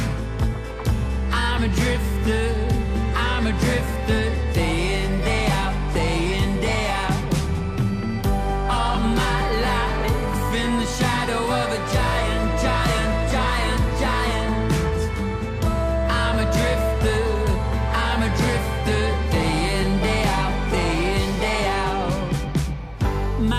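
At 6.85 s and again at 13.22 s a single sharp click cuts through the sound. Each is most likely a case of dropped samples: a tiny fraction of a millisecond of the stream goes missing, so the waveform steps abruptly from one value to a later one. Nothing audible is removed, only that discontinuity remains. On a waveform it shows as a sudden jump; on a spectrogram, as a thin vertical line spanning the frequency range.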